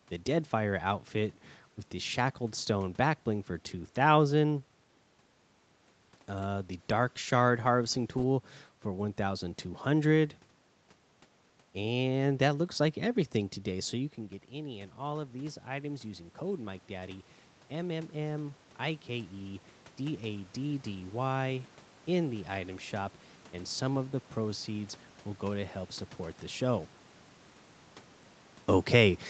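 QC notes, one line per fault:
13.74–22.78 s, automatic gain rising: after "that looks like everything", voice and room noise slowly swell together by about 10 dB, as the gain control compensates an input drop of about 12 dB.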